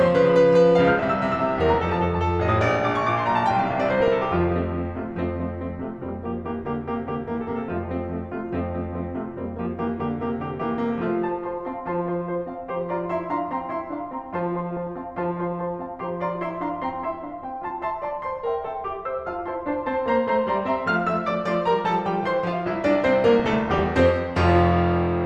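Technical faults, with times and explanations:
1.58–1.99 s, 3.86–4.41 s, 5.95–6.16 s, 14.58–14.96 s, 21.04–21.16 s, 23.40–24.02 s: DAB burbling. Weak reception lets bit errors past error correction, corrupting MP2 audio data so short blips of noise appear in single sub-bands over the music.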